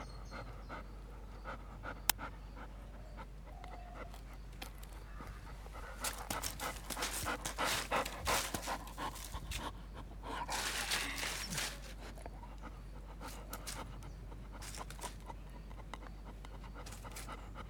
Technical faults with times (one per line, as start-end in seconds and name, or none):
none